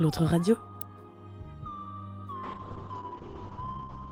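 At 0.81 s there is a sharp snap. It is an electrical switching spike, likely a nearby switch arcing into the audio line. From 2.45 s onward a call bitrate drop sets in. The sound turns rough and muffled, with high frequencies cut above 8 kHz instead of 20 kHz. This fits a fall from roughly 48 kbps to 7 kbps, held at its lowest for about 1.5 s.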